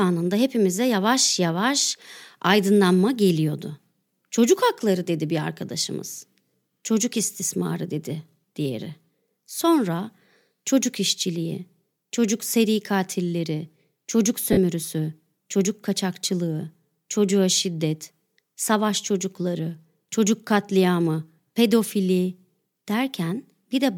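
At 14.52 s the sound breaks for about 45 ms, a gap that fits six lost LE Audio frames of 7.5 ms each. The LC3 decoder fills the hole by replaying the last good spectrum with scrambled signs, so the speech smears into a brief noisy hiss that fades before the signal resumes at 14.57 s. Unlike a hard dropout or click, there is no abrupt silence or sharp edge, only a softened, noise-like blur.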